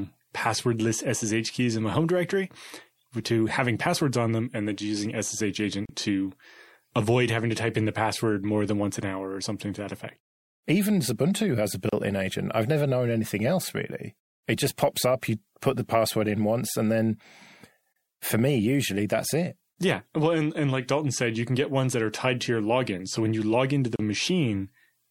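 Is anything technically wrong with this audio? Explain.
Yes. Gaps at a join of encoded pieces occur at 5.85–5.89, 11.89–11.93, 17.93–17.96 and 23.96–23.99 s, every 6.0 s. Separately encoded speech segments were butted together untrimmed, so each encoder's start-up delay and final-frame padding leave a silence of about 34 to 37 ms. It is a brief dropout with softened edges, and the speech resumes where it stopped.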